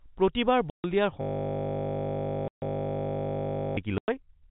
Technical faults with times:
0.70-0.84 packet loss filled with silence
1.21-3.77 system hang loop
2.48-2.62 packet loss filled with silence
3.98-4.08 packet loss filled with silence

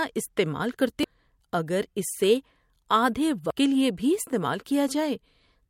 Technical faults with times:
1.01-1.04 damaged data in a compressed stream
3.50 damaged data in a compressed stream

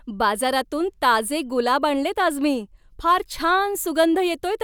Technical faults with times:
none

